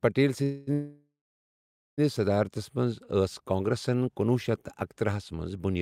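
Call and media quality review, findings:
Call audio freeze, 0.43–0.69 s and 0.73–2.00 s: sound stretched into fading buzz, second ending in ~840 ms silence; nothing lost, playback later by 237 ms then 1245 ms. Likely jitter buffer underrun from delayed packets. Spectrogram: smeared flat bands, then blank; waveform: decaying envelope, flatline.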